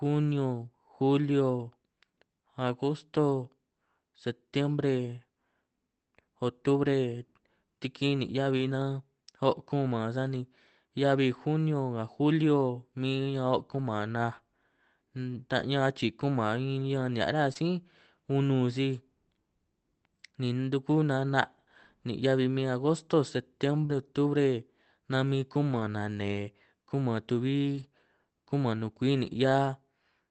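At 8.57 to 8.63 s the speech turns briefly rougher and grainier. This is a lost packet rebuilt from error correction: the missing audio was replaced by a low-bitrate backup copy carried in the following packet. There is no gap, just a coarser stretch that fits two 20 ms frames. The same thing recurs at 13.77 s, 17.55 to 17.57 s, 23.89 to 23.91 s, 25.71 to 25.81 s, 27.75 to 27.85 s and 29.15 to 29.17 s. The longer patches at 25.7 and 27.8 s each span three packets. On a spectrogram these spans show smeared, noisier harmonics below the call's 8 kHz ceiling. The waveform has no dropout.

At 17.53 to 17.57 s comes a short concealed packet loss. About 20 ms of audio never arrived, and the receiver filled it by extending the preceding sound before blending back in through the error-corrected frame. It is heard as a brief smear. A second, larger instance at 23.85 to 23.91 s covers about 40 ms and gives a wobble. 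On a spectrogram each one shows as a short band of texture carried over from the sound just before. The waveform shows a brief stretch continued from the preceding sound.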